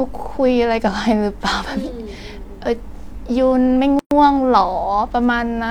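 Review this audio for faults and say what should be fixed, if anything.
A gap at a join of encoded pieces opens from 3.99 to 4.11 s. That is a gap of about 119 ms with smeared edges. Encoder delay and last-frame padding stayed in, and then the speech resumes. Trim encoder delay and padding before joining pieces.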